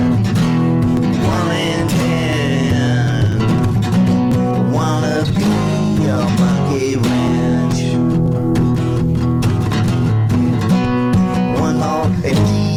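At 1.33, 2.33, 3.32, 4.32, 5.30, 6.29, 7.28 and 8.26 s, small skips mark an overlap between stream segments. Unlike a dropout, no silent gap follows. A few milliseconds are trimmed where one-second segments meet, so the waveform jumps straight ahead at a near-regular pace.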